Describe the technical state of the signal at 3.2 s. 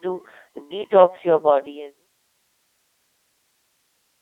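At 3.2 s there is a steady USB whine. It runs through the whole clip, not just this moment. The tone sits at 1 kHz, about 35 dB below the signal. It fits current drawn in 1 ms frames on a USB bus, leaking into the audio through power or ground. The result is a thin, fixed-pitch whistle. The smooth fade-out ended at 2.09 s, so the level is lowered here.

The speech also carries heavy Codec 2 vocoder damage, again across the whole clip. The sound points to a rate of about 2.4 kbit/s. This codec keeps only pitch, voicing, energy and a rough spectral outline. The decoder rebuilds the voice from sine waves, and the original waveform is lost. The speech sounds robotic and buzzy. The band runs from 300 Hz to 3.7 kHz, with nothing above 3.7 kHz.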